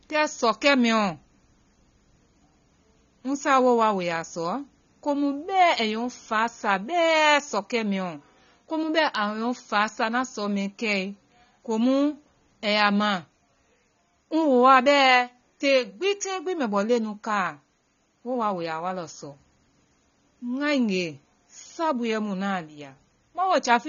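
From start to finish the speech sounds dull and smeared, with nothing above 7 kHz, and sibilants and sustained vowels carry a warbling, fizzy texture. The likely cause is AAC compression at a low bitrate, consistent with AAC-LC at around 24 kbps. With too few bits per frame, the encoder drops the top of the spectrum entirely and quantises the remaining bands so coarsely that gaps and substitute noise become plainly audible.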